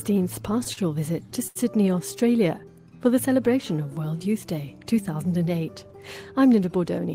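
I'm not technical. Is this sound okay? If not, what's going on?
No. Around 0.63, 0.73 and 1.47 seconds the sound briefly hangs or smears: a short stall from a late packet, where the last sound was stretched until the late audio arrived.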